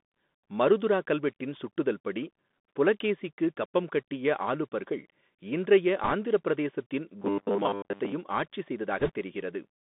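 Throughout, the speech carries the Bluetooth CVSD headset codec: a granular hiss, scratchy sibilants, and a spectrogram cut off above 3.6 kHz and below 200 Hz, which fits a 64 kbps CVSD link.

From 6.04 to 6.13 s, between "கப்பம் கட்டிய ஆலுபர்கள் இன்றைய" and "ஆந்திரப் பிரதேசத்தின்", bit errors on a Bluetooth voice link add a brief rushing crackle. At around 2 percent of bits, this shows as a broadband smear with no tall waveform spikes.

From 7.19 to 8.12 s, after "ஆலுபர்கள் இன்றைய ஆந்திரப் பிரதேசத்தின்", the sound becomes a rigid metallic buzz at 100 Hz, with 10 ms chunks repeated over most of the stretch. The likely cause is robotic sound from repeated short buffers. The spectrogram shows evenly spaced horizontal harmonics, and the waveform shows periodic copies.

From 9.00 to 9.11 s, more bit errors at roughly twice the earlier rate give a louder crackly rush, visible as denser broadband speckle.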